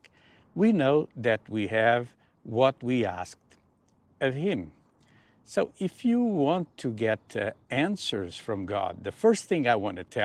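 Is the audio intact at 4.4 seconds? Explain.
Yes, the audio is intact at 4.4 seconds, with nothing there beyond the light Opus voice compression that runs through the whole clip.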